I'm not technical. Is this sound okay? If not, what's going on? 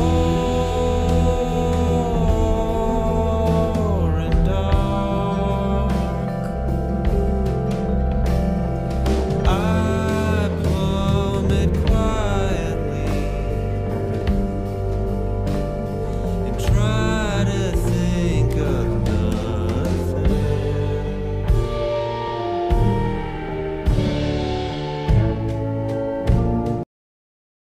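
No. There are two kinds of problem.

The first is a bit error spike. You hear a single sharp tick at 11.50 seconds and again at 16.13 seconds. Each one is over in an instant. It happens when one tiny piece of the digital data flips by mistake. For a split moment the sound jumps to a wrong value, then snaps back. The tick has nothing to do with the audio itself.

The second is a cut-off end. At 26.83 seconds the audio stops in the middle of a sound. There is no natural fade or tail. It goes straight to complete silence for the remainder of the clip. This happens when the last chunks of audio were never saved or played, so the ending is simply missing.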